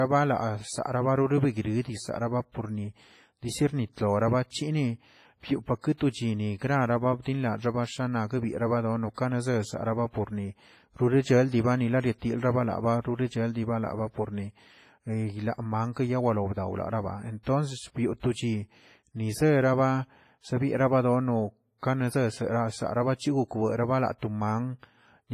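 Across the whole speech clip the sound is ringing and washy, with hiss that swells and fades with the signal and nothing above 15.4 kHz. The likely cause is WMA compression at a low bitrate, heavy enough to fit about 24 kbps. A spectrogram shows a hard ceiling and patchy gaps where weak components were dropped.

At 17.43 to 17.46 s, pre-echo smears about 35 ms of short hiss ahead of a sharp attack, which arrives softened. The codec spread noise meant for the loud onset across its whole block, so the waveform shows a low fuzzy band before the transient.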